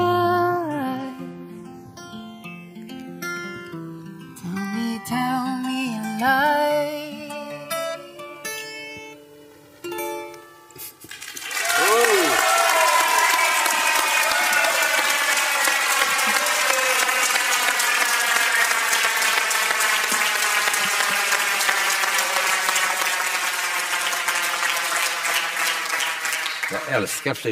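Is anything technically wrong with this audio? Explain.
Yes. The channels drift apart across the whole clip. The left and right sides behave as though they were captured on devices running from separate clocks, off by a few hundred parts per million, so the delay between them grows steadily to around 7 ms by the end. When the channels combine, the comb-filter notches glide slowly through the spectrum, giving a slow flanging sweep. Unlike a fixed phase offset, the colouration keeps moving, and unlike a flanger effect it sweeps in one direction instead of oscillating.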